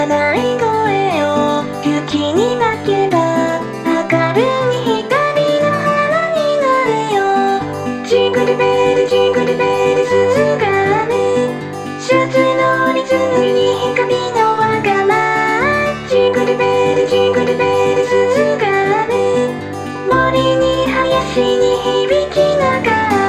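No technical faults are audible anywhere in the audio.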